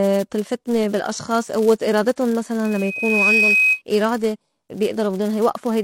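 From the very start there's a steady 200 Hz buzz riding under the speech, and it swells and fades with the level of the talking. That's a filter restarted on every block. It throws away its memory at each block boundary and starts again from silence, so every block opens with a tiny click. Those clicks arrive every 5 ms and blur into a buzz that follows the signal's level.

Also running the whole length, the top end is simply gone above 16.2 kHz. What's left has a mix of different codec artefacts heard together. That combination likely comes from transcoding between lossy codecs, something like a low-bitrate HE-AAC encode fed into MP3. The second codec wastes bits on the first one's artefacts and adds its own, and the lowest cut-off in the chain survives.

At 2.64 s a loudspeaker feedback squeal sets in. A single 2.5 kHz tone creeps up out of the speech over a bit under a second until it's sitting a few dB above the talking, then it cuts off at 3.82 s. 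The microphone was hearing the loudspeaker it feeds, and at that one frequency the loop gain went past one, so the tone kept feeding itself and grew.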